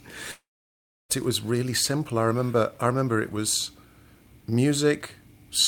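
Audio from 0.31 s to 1.12 s was likely lost to a long network dropout. The speech stretches into a fading buzz, then about 0.66 s of silence, and resumes at "it was really simple" with about 0.78 s of speech gone.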